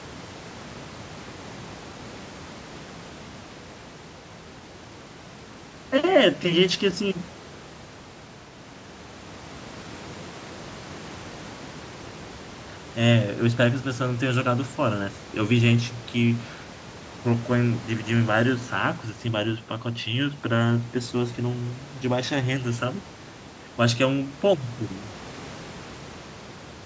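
No technical faults can be heard anywhere in this speech recording. Room noise sits in the background about 17 dB below the speech, and the call microphone processing has left nothing above 8 kHz.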